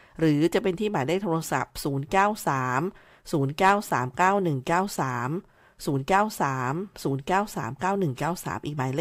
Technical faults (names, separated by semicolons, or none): none